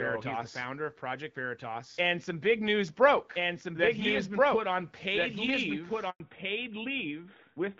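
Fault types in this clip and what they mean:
Doubled audio track: Throughout the clip there's a second full-band copy of the speech trailing roughly a second and a half behind, about 5 dB quieter and completely dry. It's likely a second capture path or an edit leaving two copies out of step.
Handover gap: Around 6.1 s the speech cuts out for 100 ms while the call switches networks. Nothing gets through during the switch, the sound dies away within a few tens of milliseconds, and whatever was said in that slice is gone.
Fallback to narrowband: From 6.2 s to the end, the call slips from HD Voice (AMR-WB at 12.65 kbit/s) down to AMR-NB at 12.2 kbit/s. Everything above 4 kHz disappears, and the speech turns duller and rougher.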